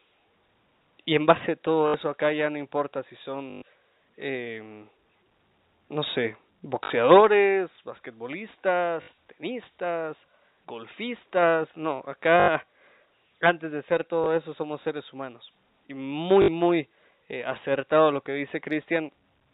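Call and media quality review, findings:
Packet loss with last packet repeated. Short robotic stutters at 1.88, 3.5 (after "ya no importa si"), 6.84 (after "no sé"), 9.02, 12.4 and 16.42 s; small blip at 14.24 s (between "antes de ser" and "eso somos seres humanos"). Gaps of 20 to 120 ms, longest at 3.5 s. Receiver jitter buffer concealment replaying the last frame. Buzz near 50 Hz on the longer runs, which fits 20 ms packets. G.711 A-law path audible as the 4 kHz telephone band.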